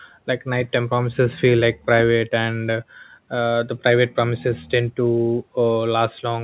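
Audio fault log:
No faults are heard in this speech. The call path carries it with nothing above 4 kHz, which fits a G.711 mu-law codec at 64 kbps.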